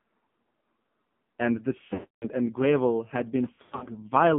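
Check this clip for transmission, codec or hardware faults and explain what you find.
The speech has two faults: AMR narrowband mobile codec coding throughout, and two bursts of lost AMR speech frames.

AMR narrowband mobile codec: across the whole clip the sound sits between 150 Hz and 3.4 kHz and is heavily buzzy and synthetic, which fits a low rate near 5.9 kbps. Unlike a plain band-limited phone line, the pulse-driven vocal-tract model adds that metallic, buzzy texture.

Lost AMR speech frames: from 1.94 to 2.27 s about 280 ms of speech drops out. The decoder repeats the last good pitch and spectral settings at falling gain, so the sound smears, then fades to silence before returning weak. From 3.54 to 3.88 s losses totalling 200 ms are scattered over 320 ms, with runs up to 80 ms, giving repeated brief dips and warbles instead of one fade. Unlike a hard dropout or a packet-loss click, each gap fades rather than cutting off abruptly.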